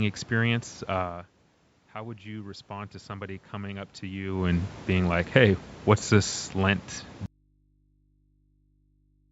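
From 1.93 to 4.4 s, just before "and being like hey", there is automatic gain rising. After the level falls by about 15 dB, the control lifts its gain by about 6 dB over some two and a half seconds. Voice and room noise swell together, unlike a talker simply moving closer.

At 7.26 s the sound cuts out abruptly and stays gone to the end, leaving only mains hum roughly 40 dB below the signal. This is an audio dropout to a faint residue, likely from the source being lost while the path stayed live. The instant break and the remaining hum distinguish it from a pause or fade.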